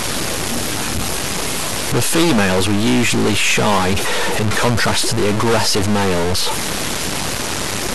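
From start to finish, a data bit in the converter or its wiring has likely stuck at one value, throwing many samples off by that bit's weight. This lays distortion over the speech and fills the pauses with noise instead of silence.

Across the whole clip, MP2 compression has likely run short of bits, at a rate that fits about 80 kbps, and shut off its upper sub-bands. Nothing remains above 12.2 kHz, so the speech sounds dull, with plainly audible gurgling, granular distortion from the coarsely coded bands that are left.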